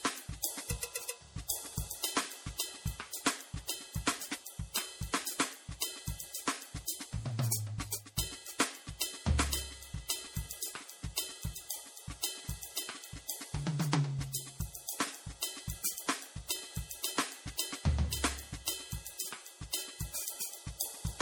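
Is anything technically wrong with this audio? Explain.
Yes. Throughout the music there is generation loss: the audio was likely decoded and re-encoded as MP3 about three times, each pass quantising on a shifted frame grid so errors accumulate. It sounds swirly, smeared and hollow, with blurred attacks, worse than one encode at around 64 kbit/s would explain.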